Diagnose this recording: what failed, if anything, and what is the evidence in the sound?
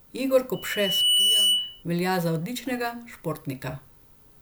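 Loudspeaker feedback squeal in the analogue mic–speaker loop, whose gain exceeds one at 3 kHz: a tone swells from 0.53 s to 1.83 s, before "velja za odličnega", showing as a bright horizontal spectrogram line.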